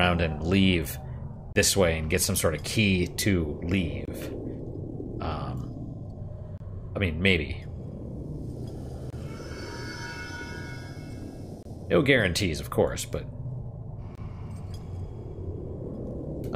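At 1.53, 4.05, 6.58, 9.10, 11.63 and 14.15 s the sound drops out for about 25 ms each time, a gap between chunks. The audio arrives in 2.5 s pieces and silence is inserted at each join rather than the pieces abutting, so nothing is lost but the flow is punctured. Each hole is heard as a brief, short hole in the sound. A spectrogram shows narrow full-height blank stripes at a steady spacing, and the waveform shows flat near-silent runs with abrupt edges.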